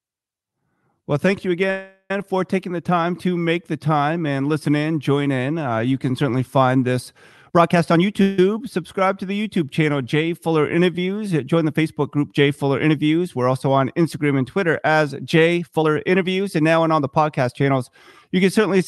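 Right after "thank you", from 1.70 to 2.11 s, there's a call audio freeze, likely packets stalling so the jitter buffer ran dry. The last sound smears into a fading buzz for about 0.4 s, with a brief silence at the end, then "for taking the time" picks up with nothing lost, just late.

After "can certainly find this", from 7.42 to 8.21 s, a jitter buffer speed-up trims roughly 0.3 s of pitch periods. It plays at 133% speed at the same pitch, so it sounds rushed.

A second short freeze follows at 8.22 to 8.39 s, likely from the same kind of stall. The sound hangs for about 0.16 s with no silence before resuming.

From 15.57 to 17.71 s there's a milder speed-up at 113%, again cutting roughly 0.3 s. It still sounds hurried.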